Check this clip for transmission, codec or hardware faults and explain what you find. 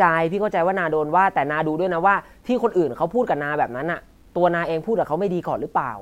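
One fault runs through the whole speech clip: low bit depth without dither. The sound is grainy, and the grit follows the speech, swelling and fading with it. Quiet passages turn rough, and the softest moments sputter or drop away. The likely cause is a reduction to about 10 bits by truncation, with no dither added. The rounding error then tracks the waveform instead of spreading as steady hiss. The distortion sits roughly 45 dB below the signal.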